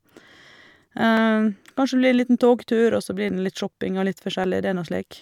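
Speech with four sharp clicks at 1.17, 2.19, 3.29 and 4.44 s, likely dropped samples, each losing only a fraction of a millisecond.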